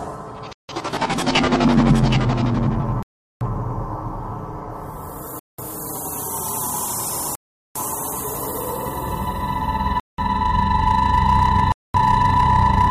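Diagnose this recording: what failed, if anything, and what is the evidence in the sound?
Playback over the wireless link dropped out six times, cutting to dead silence at 0.53 s, 3.03 s, 5.39 s, 7.35 s, 10.00 s and 11.72 s for between 161 and 403 ms before picking back up. That's most likely a Bluetooth stall, where interference delayed packets and the headphone buffer emptied.

From 0.93 s to 5.20 s there's a doubled audio track: a second full-band copy trails by around 0.7 s, roughly 5 dB down, dry with no room tail, switching in and out abruptly. It likely comes from a slower second capture path or a misaligned duplicate in the edit.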